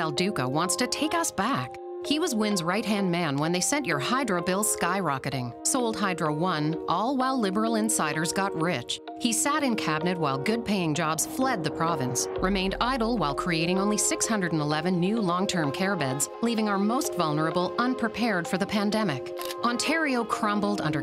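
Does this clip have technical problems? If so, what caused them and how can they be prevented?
No, nothing stood out as a technical problem on listening, so there is nothing here that calls for a fix or a preventive step.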